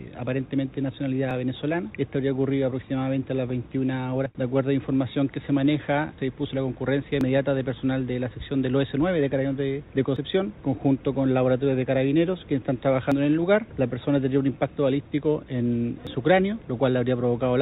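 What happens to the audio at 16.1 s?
At 16.07 s the sound skips. A short piece, roughly 50 ms, is gone, and the two sides butt together with no silence between them. The jump is abrupt rather than a fade or a dropout to quiet. This is likely audio missing between chunks. A recorder or processor working in blocks, here apparently 3 s long, loses a sliver at each changeover. The skip lands within the call-codec band, which stops at 4 kHz.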